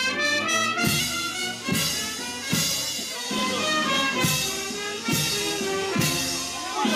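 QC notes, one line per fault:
1.00–3.15 s drift correction step: playback runs 6.27% fast and pitch rises 105 cents, just over a semitone, then snaps back. The likely cause is clock-matching software changing rate in one jump. The spectrogram shows all harmonics stepping up together, then dropping abruptly.
3.37–3.39 s DAB burbling: a brief blip of noise as corrupted data gets past error correction and wrong samples hit single sub-bands. Its length points to two damaged frames under a bit error rate of about 0.15%. The spectrogram shows isolated, blocky flares in narrow bands.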